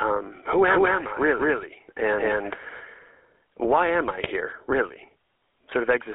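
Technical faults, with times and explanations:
Throughout, GSM full-rate codec: the speech has a buzzy, gravelly roughness and a narrow telephone sound, with nothing above 4 kHz and the band sitting roughly between 300 Hz and 3.4 kHz. The coarse, plainly audible damage fits a 13 kbps full-rate coder. It models the vocal tract as a filter and drives it with a regular pulse train that keeps only a third of the excitation samples, so fine detail in the voice becomes harsh and grainy.
0.68 to 2.80 s, doubled audio track: a second full-band copy of the speech trails the original by about a fifth of a second at much the same loudness. Each syllable is followed by a clean, dry repeat with no reverberant tail or room colour, and the repeat appears and vanishes abruptly at the edges of this span. This is likely the same signal mixed in twice, through a slower second capture path or two misaligned copies in an edit.
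4.24 s, GSM bit errors: a brief squawk and gargling burst lasting about 48 ms. Corrupted bits reached the speech decoder, which fits two damaged frames, and wrong filter, pitch or gain values made it rebuild that moment badly.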